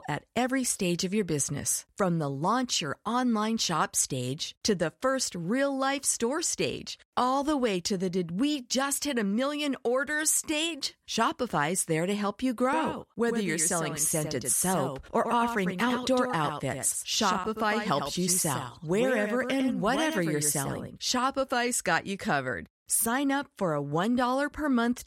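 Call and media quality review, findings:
Doubled audio track, 12.73 s to 21.13 s, right after "there to help you". Full-band copy trails by about 100 ms, about 5 dB down. No decay or room colour. Abrupt start and stop. Likely a second capture path or misaligned edit.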